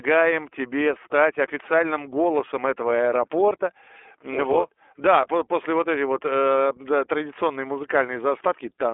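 iLBC codec coding runs throughout the speech. Each 30 ms frame's excitation is coded on its own, leaving a plainly rough, synthetic edge that fits the 13.33 kbps mode. The band runs from 300 Hz to 3.5 kHz, with nothing above 3.8 kHz.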